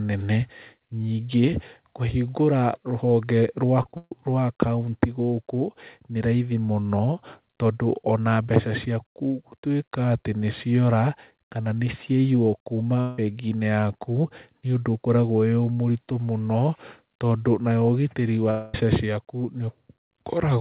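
From 3.83 to 4.12 s, repeated packet loss (robotic sound) chops the speech. Four gaps, the longest 139 ms, are patched by stretching the last sound, so about 62% of this span is filler. On a spectrogram, smeared repeated bands replace normal speech structure.

At 13.01 s, just after "kana nĩciaiywo", a stretch of about 0.17 s is replaced by a droning continuation of the preceding sound. At 18.51 to 18.75 s, right after "tondũ nayo ũgitĩri", the same happens for about 0.23 s. Neither stretch drops to silence. A long network dropout is the likely cause. On a spectrogram, flat, frozen harmonic bands stand in for the missing audio. In the waveform, the speech returns abruptly with that part lost. Throughout, the narrowband call path shows nothing above 4 kHz.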